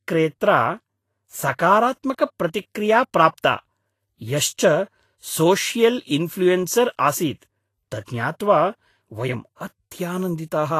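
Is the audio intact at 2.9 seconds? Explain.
No. At 2.9 seconds, as throughout, the speech has grainy, hissy treble that stops at 14.2 kHz, likely Vorbis compression at a low bitrate near 33 kbps, which turns fine detail into noise rather than simply filtering it away.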